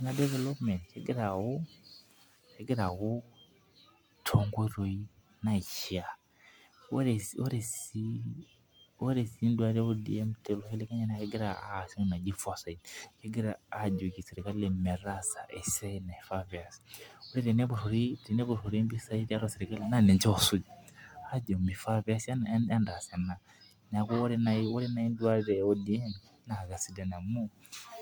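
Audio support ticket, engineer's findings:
Generation loss, throughout. Likely repeated MP3 decode/re-encode, about five passes, each requantising on a shifted frame grid. Speech swirly, smeared, hollow beyond what a 130 kbit/s stream alone would give; attacks blurred. Bandwidth still reaches 20.1 kHz.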